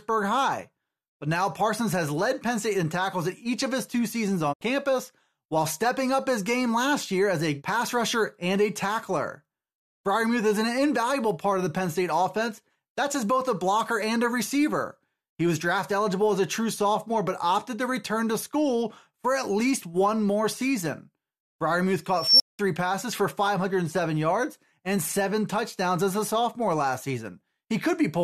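It's a speech recording with two glitches. At 4.52 s there's a digital broadcast dropout: the sound fades out over about 20 ms and stays muted until 4.63 s, losing roughly 72 ms of programme, which fits a receiver discarding a few corrupt frames and muting until clean ones arrive. Then at 22.17 s an unstable filter takes over. A squeal around 5 kHz swells for about 233 ms as the recursive filter's output runs away, clips, overflows, and leaves about 191 ms of silence before it resets, all over by 22.59 s.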